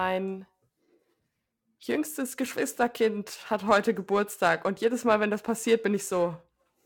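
Periodic clock jitter runs through the whole clip: the converter's sampling clock is being wobbled at around 1 kHz, so each speech component gains sidebands spaced about that far on either side, strongest at higher frequencies, giving a gritty, metallic edge that disappears in pauses.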